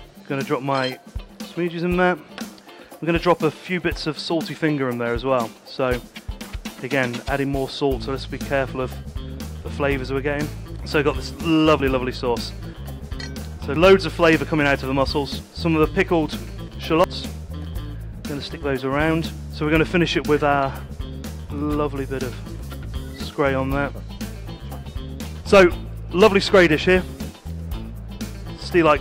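Sudden jumps forward at 11.8, 13.76 and 17.04 s, each skipping a few hundredths of a second, the last a bit more; likely a dropped buffer (overrun).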